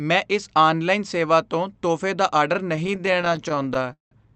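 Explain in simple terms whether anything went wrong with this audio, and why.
Repeated stalls (stutter): from 2.73 to 4.13 s, data kept arriving late, so playback ran dry over thirty times. The speech drags and stutters, but nothing is lost.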